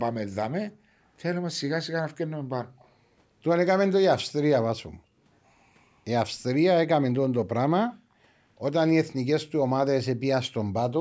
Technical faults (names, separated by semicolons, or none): background gated by the echo canceller; echo leak